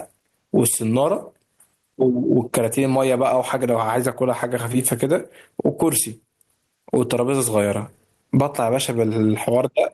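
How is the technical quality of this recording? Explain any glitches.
The technical quality is compromised by gain pumping across the whole speech clip. The gain pulls down as each loud syllable arrives, swinging around 20 dB. The likely cause is input gain set far too high, with a fast compressor or limiter clamping down on each peak and releasing in the gaps. The result is a squashed, breathing sound. On a waveform, peaks sit at an even level while the quiet parts bulge between them.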